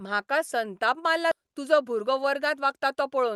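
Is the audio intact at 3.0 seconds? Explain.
No. From 1.40 to 3.26 s a jitter buffer speed-up is running: the receiver repeatedly cuts pitch-period-length slices to drain excess buffered audio, removing about 150 ms in total. The speech plays at roughly 109% speed with unchanged pitch and sounds hurried.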